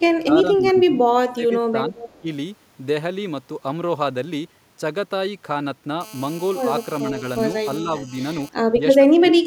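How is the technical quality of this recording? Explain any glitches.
The recording has clear call-processing faults, clustered in the first few seconds and the last two.

Speech is suppressed in double talk at 0.11–1.02 s, 1.27–1.97 s, 2.20–2.27 s, 7.81–8.14 s and 8.96–9.47 s. The level drops by about 10 dB, by about 15 dB at 1.27–1.97 s, and by about 25 dB at the end. The echo canceller likely mistook this speech for loudspeaker echo and ducked it. On a waveform the envelope sags or breaks up.

An echo leak follows at 1.97–2.21 s. A faint copy of the voice arrives 372 ms late, about 20 dB below the speech. It likely slipped past the echo canceller. A spectrogram shows a weak, smeared repeat of the preceding harmonic pattern.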